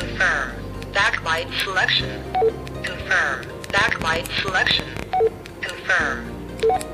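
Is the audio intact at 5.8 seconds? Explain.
Yes, at 5.8 seconds the audio is intact, with no dropout, click, distortion or other fault at that moment.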